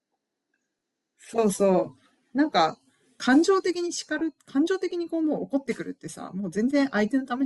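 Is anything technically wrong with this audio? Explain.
Yes. Throughout, the speech has a breathy, grainy edge in its upper range, most likely from Bluetooth LC3 compression at a rate that fits about 48 kbps with 10 ms frames, filling discarded highs with noise.

From 4.19 to 4.21 s the speech is briefly replaced by a noisy smear of the preceding sound. These are lost LE Audio frames, consistent with two 10 ms frames, where the decoder repeated the last spectrum with random signs.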